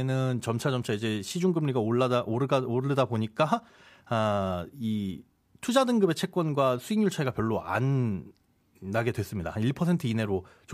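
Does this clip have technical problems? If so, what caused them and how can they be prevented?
No, no technical faults heard.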